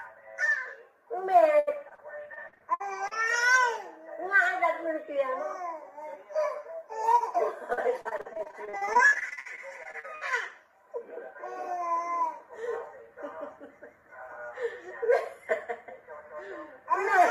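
Repeated packet loss (robotic sound) hits two stretches, 1.59 to 3.13 s and 7.73 to 10.23 s. Packets kept dropping. Each hole, up to 75 ms, was bridged by repeating the last sound. About a fifth, then a third, of each stretch is patched, so it turns choppy.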